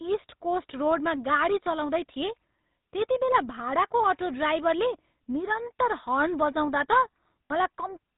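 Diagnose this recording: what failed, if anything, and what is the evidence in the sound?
The failure is at the codec stage, where the speech passed through the GSM full-rate codec and picked up plainly audible damage across the whole recording. The coder models the vocal tract and drives it with a sparse, regularly spaced pulse excitation, which gives voiced sounds a buzzy, gravelly roughness. The damage fits the 13 kbps full-rate coder. On a spectrogram, energy stops abruptly at 4 kHz, and harmonics look smeared and grainy instead of cleanly striated.

At 7.46 to 7.52 s, lost GSM frames point to the network or transport stage. About 40 ms of audio was concealed, which fits two 20 ms frames. The decoder reused the last good frame's parameters, so the sound is held briefly as a rough, metallic ring. On a spectrogram, the last spectral shape is frozen and repeated.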